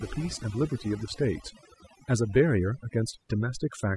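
A noise reduction stage was set too aggressively, so from start to finish this speech shows overdone noise removal. Frequency bands near its noise estimate are pushed down or cut entirely, taking quiet vocal detail with them, leaving near-silent gaps flecked with twinkling specks.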